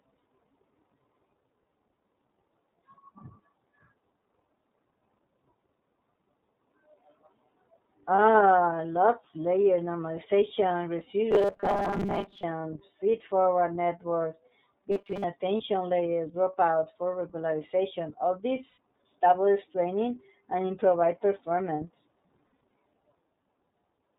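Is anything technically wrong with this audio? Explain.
Yes. The speech has three kinds of fault.

Throughout, the speech sounds muffled above 4 kHz and slightly rough and synthetic. That is the iLBC codec, a narrowband VoIP coder whose damage fits its 30 ms frame mode.

At 8.16 s, 15.57 s, 18.69 to 18.77 s, and 22.47 to 22.71 s after "training and improvise performance", brief held, buzzy vowel-like fills replace the speech. These are lost iLBC frames, bridged by the decoder repeating the last pitch cycle with noise. The gaps last 30 ms, 30 ms, 90 ms, and a scattered cluster whose longest run is about 70 ms.

From 11.31 to 12.44 s after "lots layer normalization", and 14.92 to 15.25 s after "forward networks", the speech becomes a rigid metallic buzz at 200 Hz. This is robotic sound from repeated short buffers. The likely cause is a starved buffer repeating its last 5 ms, which skips most of the real audio.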